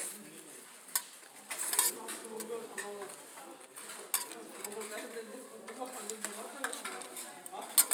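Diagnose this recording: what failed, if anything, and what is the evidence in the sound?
A driver or buffer stage likely dropped samples, a fraction of a millisecond, at 6.02 s; the waveform jumps, giving one sharp click.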